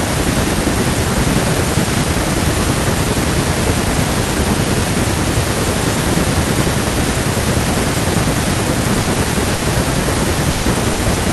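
Four bursts of packet loss hit the speech near the end, at 9.01 to 9.10 s, 9.55 to 9.64 s, 10.51 to 10.66 s and 10.93 to 11.02 s. In each, the receiver stretched the last sound to cover 60 ms (120 ms in the third), fading it into a held buzz or hiss, then resumed with that much speech missing. A spectrogram shows frozen, flat bands decaying before an abrupt jump.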